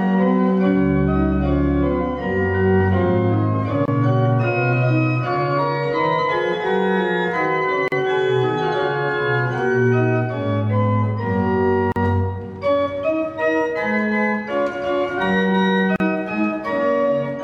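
At 3.86 s, and again at 7.88, 11.92 and 15.96 s, the sound drops into brief silence: a gap at a join of encoded pieces, about 25 ms the first time and 40 ms after that. The regular four-second spacing points to separately encoded segments butted together with their encoder delay and end padding left in. Unlike a dropout, the sound picks up exactly where it stopped, with no material missing, across smeared edges.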